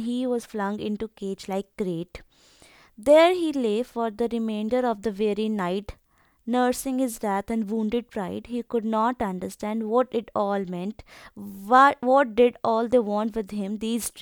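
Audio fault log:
No technical faults can be heard in this speech.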